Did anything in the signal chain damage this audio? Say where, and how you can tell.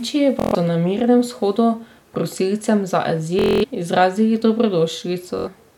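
Yes. There is Bluetooth stutter on the wireless link. Packets were lost or arrived late, so the receiver kept replaying its last short buffer. That repeated slice buzzes at 0.40–0.55 s, 3.39–3.65 s and 5.39–5.48 s, and then the speech resumes further on, skipping about 70 to 230 ms.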